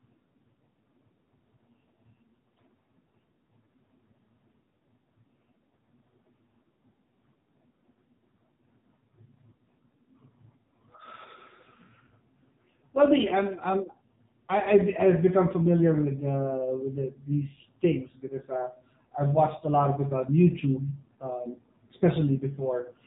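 From start to end, the speech carries AMR narrowband mobile codec damage. Nothing above 4 kHz survives, so it sounds muffled and phone-like. The buzzy, synthetic tone suggests heavy coding, which fits a low mode around 5.9 kbps, with few pulses left to model each frame.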